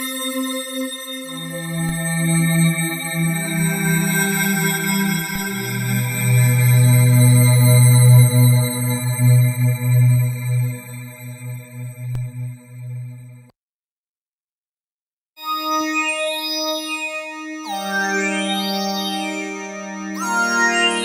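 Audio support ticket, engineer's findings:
Low thumps at 1.89, 5.36 and 12.15 s, sound continuing unchanged. DC step: baseline jumps about −19 dBFS (about −18 dBFS last), then drains away through the 20 Hz high-pass.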